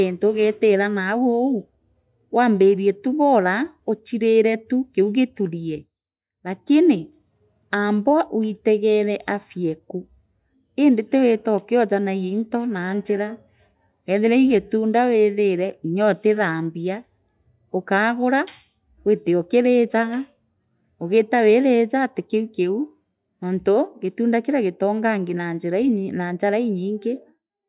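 Nowhere in the recording does the speech signal show a technical fault.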